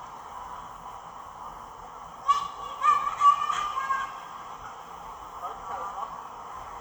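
No technical faults can be heard anywhere in the audio, and the signal stays intact and continuous throughout.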